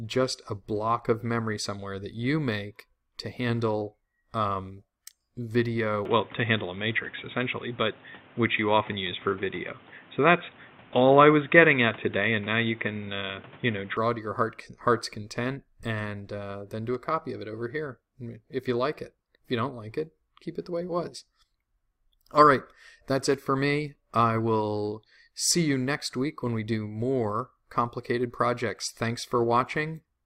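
At 6.05 s the sound abruptly narrows and turns boxy, with nothing above 3.8 kHz, a level shift of around 5 dB, and a new noise floor roughly 30 dB below the signal. There is no gap at the transition. This is likely an input switched to a poorer device, a lower-grade microphone or headset path with its own coloration and noise. Full bandwidth returns just as abruptly at 13.97 s.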